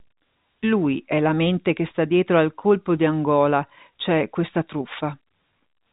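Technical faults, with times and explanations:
Nothing here counts as a technical fault; the speech simply carries the narrow G.711 telephone band, with nothing above about 3.8 kHz, just as a normal phone line would.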